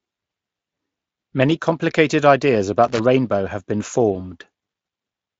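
From 2.84 to 3.00 s, between "complicated ideas" and "rainbow have been", a loose connector crackle breaks in as an irregular scratching burst. A worn contact is making and breaking, chopping the signal. On a waveform this shows as jagged gaps and spikes; a spectrogram shows scattered broadband vertical streaks.

At 4.13 to 4.25 s, just after "rainbow have been", VoIP packet loss concealed by the speech codec stretches the speech into a brief, fading sound, which fits a single lost 20 ms frame. The Speex decoder, running at 34 kbps, extrapolated the missing packet from its last pitch and filter, and because each frame builds on the last, the weakened sound persists for about 120 ms. A spectrogram shows smeared, repeated bands that dim, and the waveform's envelope sags.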